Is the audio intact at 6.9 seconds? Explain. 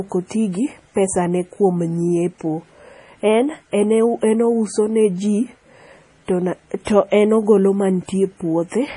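No. A pre-echo runs from 6.85 to 6.87 s: quantisation noise spread across the coding block leaks into the quiet moment before an attack, heard as a brief hiss that softens it, visible as a smear ahead of the onset. This sits within MP3 compression throughout, likely at a low bitrate around 32 kbps, giving watery, swirly speech with a spectrogram showing nothing above 10.6 kHz.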